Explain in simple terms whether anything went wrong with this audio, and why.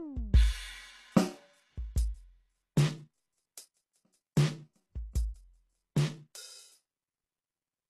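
Two problems can be heard in this music.

Throughout the clip, the treble has a gritty, metallic quality, and nothing is present above 12.3 kHz. This is most likely HE-AAC compression at a very low data rate. To save space, this kind of encoder stores only the lower part of the sound accurately. It then fakes the upper range by copying lower material upward. That fake treble does not sound natural, and the damage is plainly audible.

At 4.35 s there is a pre-echo. A sharp attack is preceded by a brief hiss, about 18 ms long, that arrives just before the hit itself. The encoder handles sound in short chunks and spreads its errors evenly across each chunk. Because this attack falls near the end of a chunk, noise meant to hide under the loud hit leaks into the quiet moment before it, and the attack sounds blurred.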